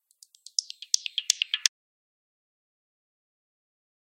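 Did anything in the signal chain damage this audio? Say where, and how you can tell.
Yes. An audio dropout to silence starts at 1.68 s and runs to the end of the clip. The sound stops abruptly mid-flow and is replaced by silence, with no room tone or noise floor underneath, so the recorder kept writing silence rather than capturing a quiet room. The stage is the input side, most likely a disconnected device, failed link or stray mute. Everything after that point is lost.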